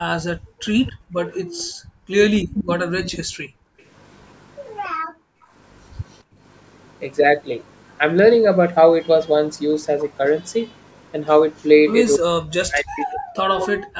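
A video or display buzz runs through the whole recording: a 50 Hz hum at the picture's field rate with hash above it, plus a thin whine at 15.6 kHz from the line scan, roughly 30 dB under the speech. On a spectrogram it shows as a steady bright line at 15.6 kHz and a comb of 50 Hz harmonics along the bottom.

From 0.37 to 3.8 s the background is gated by the echo canceller. It clamps the microphone while the far end plays, so the room tone drops by up to about 38 dB, about 2 s in total, and then swells back. The waveform shows the noise floor collapsing into near-flat gaps. The same gating returns from 4.89 to 6.4 s, dipping about 37 dB for roughly 0.7 s.

Echo leak appears as a ghostly copy of the speech trailing 279 ms behind, faint at 0.86 to 1.41 s and quite prominent at 2.54 to 3.82 s. Shorter scraps, barely audible, occur at 6.13 to 6.17 s and 11.57 to 11.65 s. A spectrogram shows faint repeated harmonic patterns offset by that delay. 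The likely cause is an echo canceller letting residual loudspeaker pickup through.

From 12.17 to 13.84 s the talker's level dips and breaks up, losing up to around 40 dB over about 1.5 s in patches. The waveform shows the speech envelope hollowed into fragments, and the spectrogram shows energy vanishing in blocks. This is speech suppressed in double talk, likely from the canceller ducking both sides while they overlap.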